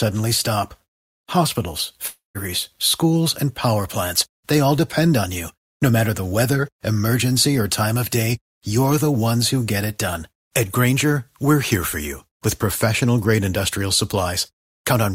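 From 2.07 to 2.38 s the speech breaks off. The last sound is stretched into a fading buzz, then about 150 ms of near-silence, and the talk resumes at "schools and power plants" with roughly 280 ms of material simply gone. This is likely a long network dropout. Unlike a brief packet-loss click or a single concealed frame, the gap lasts about a third of a second, and the filler runs out before the audio returns.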